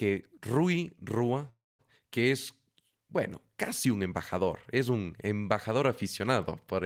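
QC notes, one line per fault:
1.49–1.81 s, call audio freeze: the speech halts for about 296 ms, a short fading continuation then about 220 ms of silence, and resumes where it stopped with nothing lost, now 296 ms late. Likely delayed packets drained the jitter buffer.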